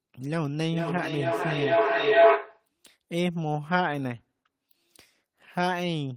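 From 0.72 to 2.7 s a feedback howl grows: a microphone-to-loudspeaker loop gains level every pass, with a loop delay of roughly 400 ms, narrowing to a tone near 700 Hz that peaks about 9 dB over the speech. A spectrogram shows one bright horizontal line, and the waveform swells.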